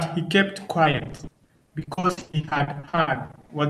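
From 0.83 to 3.51 s the speech suffers repeated packet loss, producing a robotic sound. Dozens of short gaps, none longer than 60 ms, are patched by extending the preceding audio, so nearly half of this stretch is concealment, heard as choppy speech with missing fragments.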